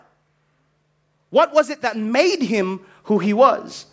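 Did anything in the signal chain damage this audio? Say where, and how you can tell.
Yes. Automatic gain rising in the call processing stage: from 1.30 s to 3.67 s the level climbs by about 9 dB, and the background noise swells with the speech. A speaker moving closer would lift only the voice, not the background with it.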